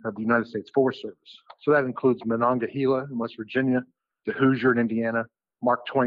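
Channel delay (comb filtering) runs through the whole clip. One channel lags the other by roughly a tenth of a millisecond, a few samples, and mono summing cancels a first notch near 5 kHz. Unlike flanging, the notches stay fixed, giving a steady hollow dullness.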